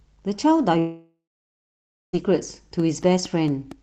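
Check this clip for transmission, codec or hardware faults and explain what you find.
Two faults are audible in this speech clip: a long gap in the audio followed by a run of regular clicks.

From 0.79 s to 2.15 s there is a long network dropout. About 1.34 s of audio is missing. The receiver first extends the last sound as a fading buzz or hiss, and then roughly 0.95 s of near-silence remains before the speech resumes. This is likely packet loss on the link, with concealment masking only the start of the gap. The lost stretch is skipped, not replayed late.

From 2.80 s to the end of the clip, a train of clicks sits over the speech. The pulses repeat regularly at about 4.4 per second and are roughly as loud as the speech itself, so they stand out as steady ticking through words and pauses alike. Each click has much the same shape, which fits a repetitive external disturbance such as electrical interference or a faulty connection or power supply injecting a pulse at a fixed interval.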